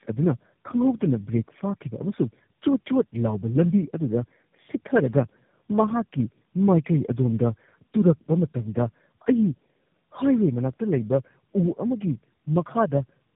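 Tandem speech coding runs through this speech recording: it sounds rough, muffled and warbly, which fits three chained speech codecs each re-encoding the last one's damaged output, leaving nothing above 3.8 kHz.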